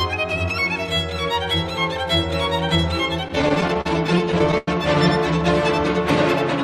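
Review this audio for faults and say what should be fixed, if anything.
Repeated stalls (stutter) run from 3.28 to 4.68 s: eighteen short holds, the longest 95 ms, where late packets emptied the jitter buffer and the last sound was stretched, covering about 22% of that span. Unlike dropouts, nothing is cut out; the audio drags rather than skipping. Prevent it with a deeper or adaptive jitter buffer and a steadier network path.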